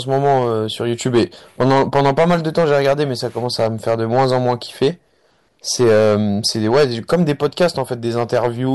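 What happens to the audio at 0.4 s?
At 0.4 s the speech is hit by hard clipping, which runs through the whole clip rather than starting there. The signal is driven about 10 dB past what the chain can pass, so every peak is sliced flat, touching a few percent of samples. Those squared-off tops throw harmonics high into the spectrum, giving a harsh, buzzy fuzz on loud syllables. Unlike soft saturation or a limiter, the edge is abrupt and gritty rather than rounded or pumping.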